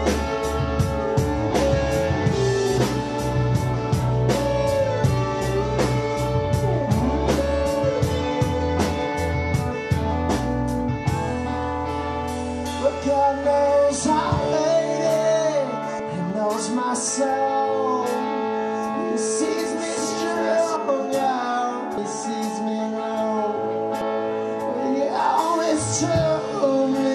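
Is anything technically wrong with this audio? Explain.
Yes, there are three kinds of fault.

Compressed frames skipped: at 2.77, 15.99, 21.97 and 24.01 s the audio jumps ahead with a brief smeared blip, losing roughly 200, 100, 300 and 150 ms. Whole 26.1 ms codec frames went missing or were rejected as damaged.

Dropped samples: single sharp clicks at 16.30, 19.67 and 20.89 s, each a thin vertical line across the spectrum. The likely cause is a fraction of a millisecond of samples missing, making the waveform jump.

Doubled audio track: from 18.94 to 20.76 s a dry, full-band copy about 5 dB quieter trails roughly 0.7 s behind, starting and stopping abruptly, likely from a second, slower capture path being mixed in.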